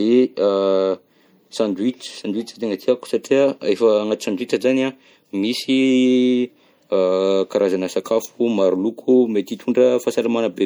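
Right from the start and all the way through, the speech has that watery, swirly quality, likely MP3 compression squeezed hard. Starved of bits, the encoder lops off the top end and lets faint detail flicker in and out, which fits a 64 kbps encode.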